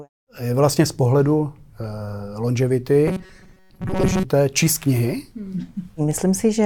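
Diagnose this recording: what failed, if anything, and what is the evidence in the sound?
The driver or buffer stage likely starved between 3.08 and 4.24 s. It kept replaying a block of about 5.3 ms instead of fresh audio, so most of that stretch is repeats. The result is robotic sound from repeated short buffers: a rigid 188 Hz buzz until "číst knihy".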